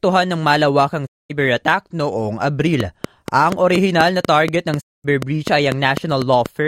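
Twice in this speech recording the sound fades out over about 20 ms and drops to silence. The first gap runs from 1.05 to 1.32 s, right after "ng malawakang", and the second from 4.80 to 5.06 s. Each hole lasts about 224 ms, and whatever was said during it is gone. This is a digital broadcast dropout. The receiver lost the signal or rejected corrupt frames and muted until clean data arrived again. A gap of that length fits roughly seven lost frames. From 2.80 to 6.47 s a train of clicks runs steadily at about 4.1 per second, roughly fifteen sharp, alike pops in all. They stand out at around 10 dB above the speech. The even spacing and matching shape point to a repeating electrical pulse, likely interference from nearby equipment or a faulty connection or power supply.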